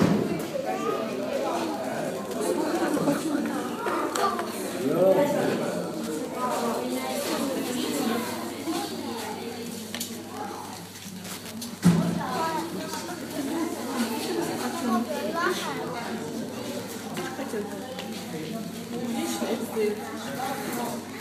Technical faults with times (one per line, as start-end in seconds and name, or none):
1.08-21.20 Wi-Fi interference